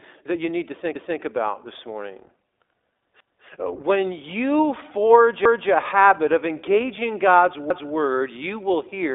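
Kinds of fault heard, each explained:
iLBC codec: this low-bitrate narrowband VoIP codec leaves nothing above about 3.8 kHz, so the speech sounds boxed-in, a bit rough and noticeably synthetic.
Overlapping chunks: each new chunk starts before the last one finishes, so about 250 ms of speech replays every 2.25 s as a stutter, first right after "that you need to".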